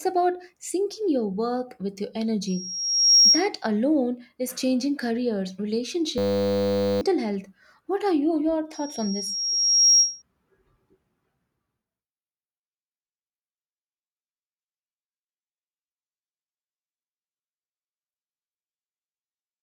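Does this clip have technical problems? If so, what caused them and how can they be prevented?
Yes. Loudspeaker feedback squeal appears at 2.47 to 3.48 s, after "your work with your", and at 8.74 to 10.22 s, after "are you your". The microphone re-amplified its own loudspeaker until a 5.6 kHz tone swelled over roughly 0.7 to 1 s to about 10 dB above the speech. Lowering monitor gain, moving the microphone out of the speaker's path, or notching 5.6 kHz prevents this.

A system hang loop runs from 6.18 to 7.01 s, after "alone is changing careers". The system froze while the hardware replayed one 10 ms buffer, producing a 100 Hz buzz and losing about 0.7 s of audio. Stable drivers, adequate CPU headroom and freeze-free recording software prevent it.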